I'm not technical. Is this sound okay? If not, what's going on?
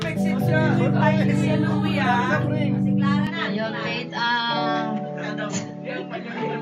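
No. From about 3.27 s to the end, the sound turns duller and faintly hissier with no gap or volume jump, likely an input switched to a poorer device.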